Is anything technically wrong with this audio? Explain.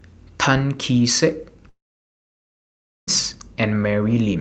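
Yes. From 1.69 to 3.10 s the speech stops; a short fading buzz gives way to roughly 1.3 s of silence. This is likely a long network dropout, with that audio lost.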